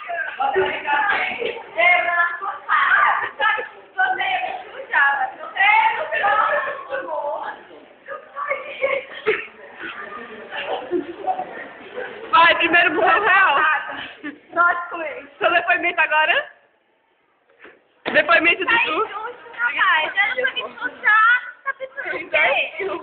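No technical faults can be heard anywhere in this audio.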